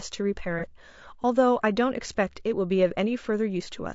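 A speech recording that sounds rough and grainy throughout, with noise between the harmonics and a thin, synthetic-sounding top band. This is likely low-delay AAC compression (AAC-ELD), whose short frames resolve pitch harmonics poorly; the damage fits a low bitrate around 32 kbps. From 0.59 to 0.64 s a brief smeared, phasey patch marks AAC frame loss with concealment. The decoder bridged roughly 30 ms of missing audio, consistent with a single lost frame, by reusing the last good spectrum.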